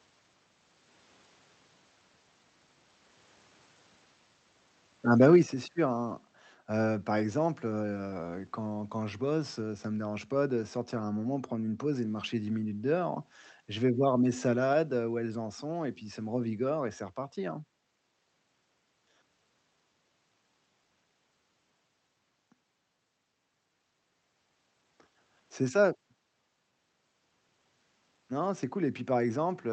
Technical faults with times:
5.20-5.36 microphone overload
5.43 microphone volume stepped down

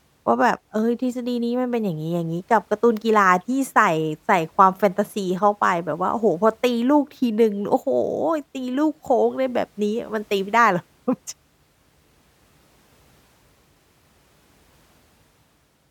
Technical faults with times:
none

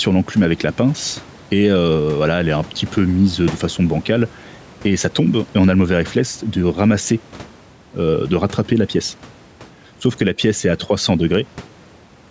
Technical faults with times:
0.00-12.31 gain pumping

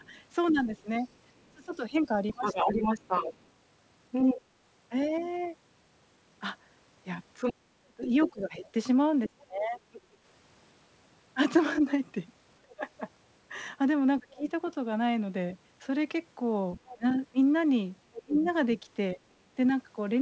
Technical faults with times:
0.00-2.79 speech suppressed in double talk
0.03-4.41 other side's voice leaking through
7.34-10.01 other side's voice leaking through
7.52-9.81 speech suppressed in double talk
12.61-14.47 speech suppressed in double talk
16.77-18.80 other side's voice leaking through
16.93-19.20 speech suppressed in double talk

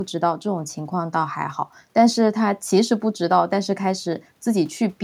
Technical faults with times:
none

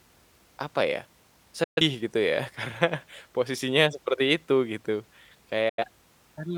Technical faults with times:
1.63-1.81 digital broadcast dropout
5.69-5.84 digital broadcast dropout

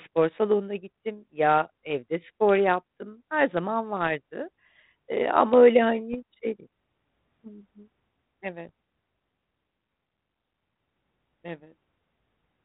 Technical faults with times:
6.13-6.17 bit errors on an ADPCM link
8.58-8.71 bit errors on an ADPCM link

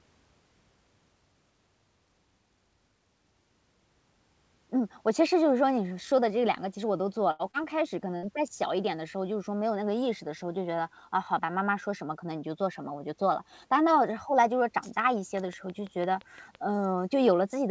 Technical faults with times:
7.31-7.42 burst of packet loss
7.51-7.56 short concealed packet loss
8.16-8.26 burst of packet loss
15.37-16.56 train of clicks

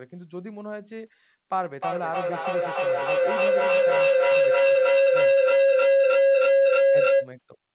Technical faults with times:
1.80-7.33 feedback howl

